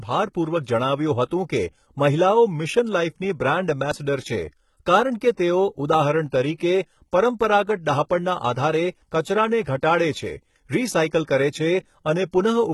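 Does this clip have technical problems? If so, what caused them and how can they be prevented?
Yes. Throughout the speech the treble sounds synthetic, with gritty, lispy sibilants and a metallic sheen. This is likely HE-AAC compression: spectral band replication rebuilds the top end from copied lower bands, and the heavy damage fits a bitrate near 16 kbps. Encoding at a higher bitrate, or with a codec mode that codes the full spectrum, prevents it.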